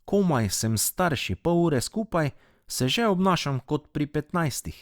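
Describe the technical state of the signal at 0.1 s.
At 0.1 s the signal is intact, with no audible fault at that moment.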